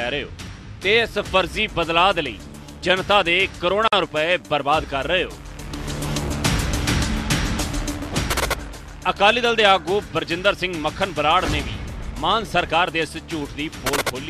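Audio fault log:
3.88–3.93 s, gap at a join of encoded pieces: separately encoded segments joined untrimmed, so encoder delay and end padding leave a 50 ms gap, smeared edges.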